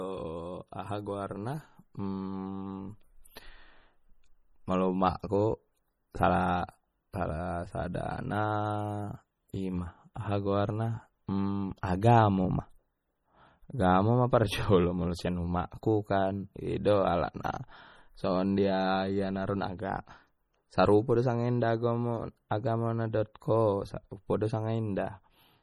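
Throughout the speech, the sound turns watery and swirly. S sounds chirp metallically, and onsets smear. The cause is likely MP3 compression, and heavy. It fits a bitrate near 32 kbps. Weak frequency lines vanish and return from frame to frame.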